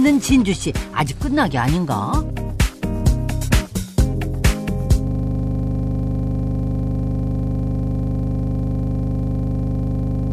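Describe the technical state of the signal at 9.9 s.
At 9.9 s the signal is stuck in a system hang loop, running from 5.07 s to the end. A frozen system replays one 40 ms piece, producing a rapid 25 Hz stutter.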